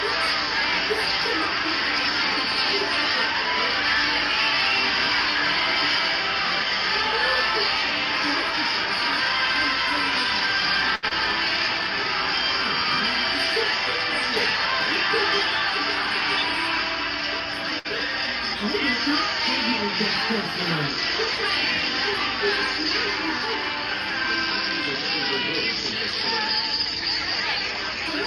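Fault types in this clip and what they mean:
Short stall from a late packet: the jitter buffer ran dry, so the last sound was held for 73 ms at 10.95 s and 60 ms at 17.79 s.
Short concealed packet loss: 20 ms of audio never arrived near 11.09 s. The receiver continued the preceding sound over the gap, causing a brief smear.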